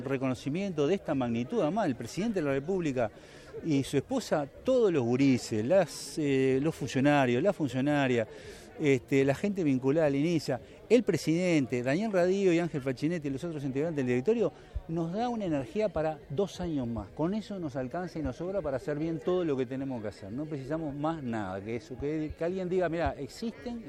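From 2.05 s to 3.40 s, a filter restarted on every block, dropping its stored state and starting each block from silence. Each block boundary gets a small transient, and together they form a buzz at 46.9 Hz, which fits a 1024-sample block, that rises and falls with the sound's level. The waveform shows evenly spaced spikes about 21 ms apart. The spectrogram shows matching faint vertical lines and a comb of 47 Hz harmonics.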